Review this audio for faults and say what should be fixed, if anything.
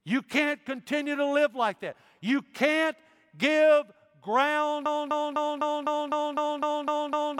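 From 4.86 s to the end, the speech locks into a broken-record loop: a fragment of about 0.25 s plays ten times back to back with identical content, so the remaining speech never arrives. The likely cause is a stalled player, encoder or stream that kept resending the last fragment it held while new audio was lost. To prevent it, have the playback or streaming path output silence or flag an underrun rather than repeating its last buffer.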